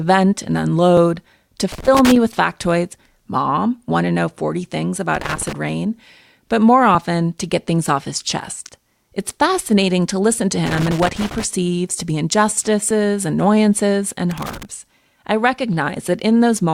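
At 0.97 s there is a tiny skip. This is an overlap between stream segments. The audio arrives in 2-second segments, and two of them claimed the same stretch of time. The player discarded the doubled part, but that sound had not really been repeated. About 10 ms is lost, and the waveform jumps across the gap. The same tiny skip returns at 4.96 s.

From 1.72 to 2.16 s comes a rough burst of crackle. This is loose connector crackle. A worn or dirty contact keeps making and breaking as it shifts. The signal is chopped into fragments, and the result sounds scratchy and irregular. It returns from 5.15 to 5.53 s. The longest burst runs from 10.66 to 11.44 s. The last one runs from 14.31 to 14.65 s.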